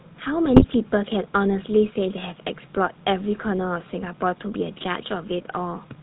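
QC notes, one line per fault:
throughout, GSM full-rate codec: the speech has a buzzy, gravelly roughness and nothing above 4 kHz, which fits a 13 kbps full-rate stream. The codec rebuilds the voice from a vocal-tract filter driven by coarse, regularly spaced pulses.
0.56 to 0.74 s, GSM bit errors: the speech breaks into squawks, pops and gargling for under a fifth of a second. Corrupted bits, consistent with a few percent of the stream flipped across roughly nine frames, scramble the decoder's filter, pitch and gain values.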